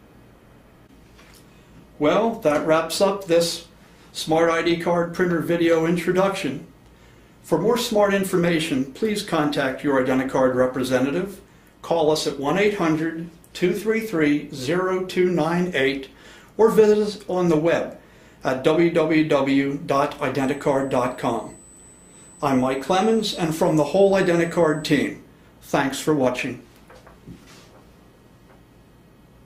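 From 20.4 to 25.08 s a USB whine appears. It is a fixed tone at 8 kHz, strongest at 16 kHz. The bus draws current in 125-microsecond microframes. That current leaks in through power or ground. The whine sits about 25 dB below the sound.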